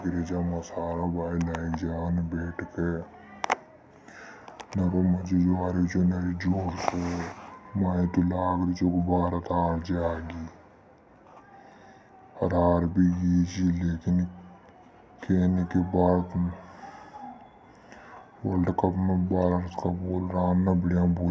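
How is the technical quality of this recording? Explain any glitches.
The recording has one fault, present throughout: a wrong sample rate. The speech plays slow and low, at about 0.73 times normal speed and roughly 5.5 semitones down. Samples captured at one rate are read out at a lower one with no conversion. That fits 22 kHz audio played at 16 kHz. Pitch and tempo drop together, so voices sound heavy and dragged.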